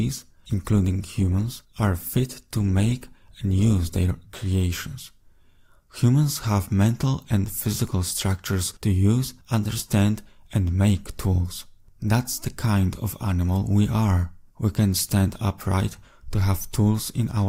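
For the first 4.0 s the audio is dull and smeared, with the treble thin or replaced by a synthetic hiss and codec artefacts stronger. At 4.0 s the quality jumps abruptly to a fuller, cleaner sound with no gap. That is an adaptive stream starting at a low bitrate: the player began on a cheap rendition to start fast, consistent with Opus at around 24 kbit/s, then switched up, to something like 64 kbit/s, once it had measured the connection.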